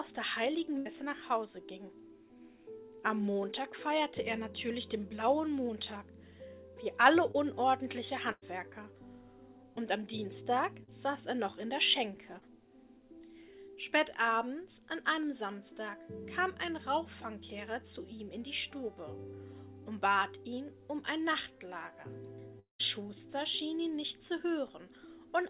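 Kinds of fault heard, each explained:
Burst of packet loss: Several packets in a row failed to arrive in time. At 0.78 s about 80 ms is lost and covered by a fading continuation of the last sound. At 8.32 s about 100 ms goes missing, and the fill decays to roughly 30 ms of silence before the audio resumes further on.
Short concealed packet loss: Tiny gaps are patched by extending the preceding sound and then blending back into the real audio. These appear at 7.31, 10.84 and 12.39 s. Each loses 20 to 40 ms and is heard as a brief smear or wobble.
Long network dropout: From 22.59 to 22.81 s the audio stops arriving, likely from a network stall. The last sound is stretched into a fading buzz or hiss. About 130 ms of silence follows, and the audio returns with roughly 200 ms lost.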